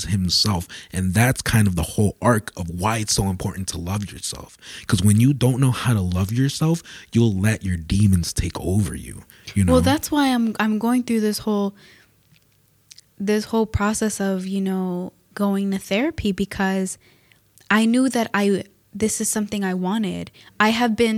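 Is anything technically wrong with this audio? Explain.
No, nothing technically wrong can be heard in this speech recording. It runs without any dropout, distortion or glitch at any point.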